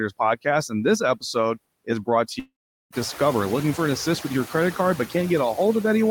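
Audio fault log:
Throughout, noise suppressor artifacts: the background sinks in the pauses and swells back under the speech. The suppressor pulls down, frame by frame, the bands it judges to be steady noise, by about 17 dB.
2.39 to 2.92 s, long network dropout: the sound dissolves into a fading buzzy continuation of the last moment, then about 0.4 s of silence, and speech resumes with about 0.52 s missing. Audio likely stopped arriving, and the receiver briefly stretched the last sound before giving up.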